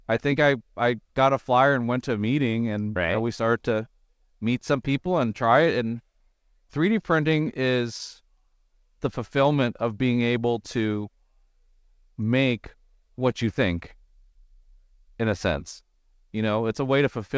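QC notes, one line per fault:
Nothing to flag on this one: the speech comes through an ordinary call path, with the top end stopping at 8 kHz, which fits a G.722 link running at 64 kbps.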